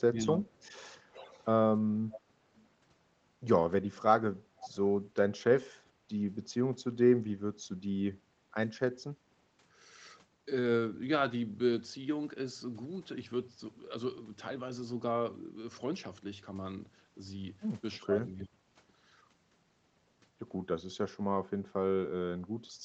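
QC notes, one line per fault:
0.09–0.43 s, speech suppressed in double talk: The talker dips by about 10 dB for roughly a third of a second. Both ends were likely talking at once, so the echo canceller couldn't tell the near voice from loudspeaker echo and pulled everything down.
0.49–0.87, 1.09–1.45, 2.10–2.21, 2.58–2.68 and 4.58–4.76 s, echo leak: Scraps of the voice come back 324 ms late, from very faint (about -35 dB) up to fairly noticeable (about -15 dB at 4.58 s). These are likely a far-end speakerphone whose canceller let part of the pickup through.
17.99–18.09 and 18.41–18.65 s, speech suppressed in double talk: Two more dropouts, the first about 15 dB down, the second much deeper at about 30 dB, nearly a cut. It's the same likely overlap pattern, with the canceller ducking the talker while the other side speaks.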